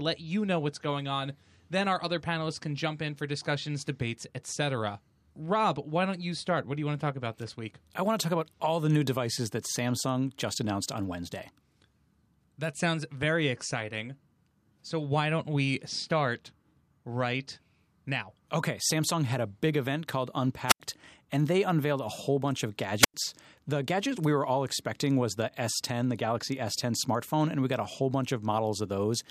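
Wireless microphone squelch dropouts at 20.67–20.80 s, after "a big event called", and 23.00–23.14 s, after "a whole bunch of": the radio signal fades, hiss rises, then the receiver mutes for about 85 ms and 96 ms.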